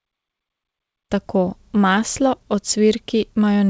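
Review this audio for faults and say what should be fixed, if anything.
Nothing needs fixing: the smooth fade-in from roughly 1 s to 1.13 s is intentional, and the band ending at 8 kHz fits a wideband call codec such as G.722.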